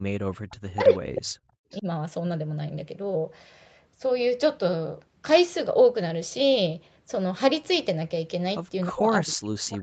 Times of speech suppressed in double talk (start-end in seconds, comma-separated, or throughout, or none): 0.00-1.51, 1.81-1.86, 8.91-9.82